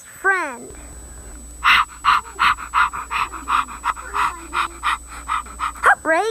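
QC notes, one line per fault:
Throughout, switching supply whistle: a thin tone wandering around 7.9 to 8 kHz, roughly 20 dB under the signal, from a supply running in audible burst mode or beating with another one.
0.93, 2.04, 3.90, 4.67 and 5.46 s, dropped buffer (overrun): jumps where the sound skips ahead, losing around 20 ms, or about 70 ms at 3.90 and 5.46 s. These are likely samples overwritten before being read.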